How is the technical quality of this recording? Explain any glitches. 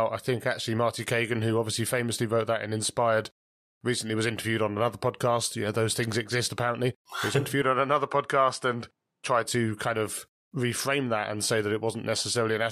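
There is one glitch. From 7.62 to 9.45 s the input likely switched to a poorer device: nothing above 11.4 kHz gets through, so the speech turns duller, with a faint new noise floor about 55 dB down. A spectrogram shows the top band abruptly empty, with no silence or level jump in the waveform.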